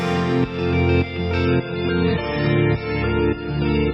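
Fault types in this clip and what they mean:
Adaptive stream at a lower bitrate: from 1.45 s to the end, the sound turns abruptly dull and smeary with no gap, with nothing above 5.4 kHz. The stream switched to a lower-quality version, which fits a fall from roughly 128 to 16 kbit/s MP3.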